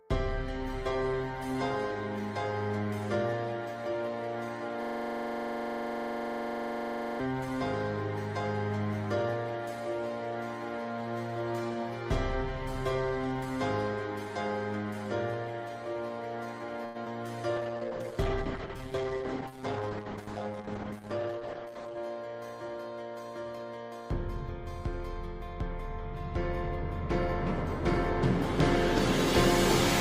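From 0.88 to 2.87 s the audio turns rough and grainy, a call bitrate drop in which the encoder's budget fell from 32 to 18 kbps and everything was coded more coarsely.

Between 4.83 and 7.20 s a 42.67 ms fragment repeats 56 times as a steady 23.4 Hz buzz. This is a system hang loop: the driver froze while the hardware kept replaying one buffer, which fits a 2048-sample ring.

From 16.85 to 16.97 s a sound is held unnaturally long. In this short stall from a late packet, the receiver stretched the last audio for 94 ms until the packet arrived.

From 17.05 to 17.08 s there is a brief smear. This is short concealed packet loss: 20 ms never arrived, and the receiver filled the gap by extending the preceding sound.

From 17.56 to 22.03 s the audio turns rough and degraded again, in a deeper call bitrate drop from 32 to just 11 kbps.

Within that stretch, from 18.97 to 20.21 s, the audio runs about 6% fast at unchanged pitch. 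In this jitter buffer speed-up, the receiver trimmed roughly a tenth of a second in small pitch-period slices to shrink its backlog.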